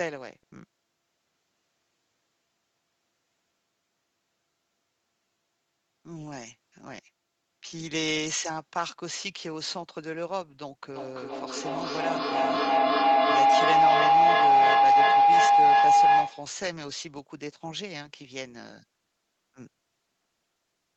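At 10.96 s a feedback howl kicks in: two devices in the same room on this call loop mic to speaker and back, each pass louder. It narrows to a tone around 700 Hz, pulsing roughly every third of a second, peaks about 13 dB over the speech, and stops at 16.62 s.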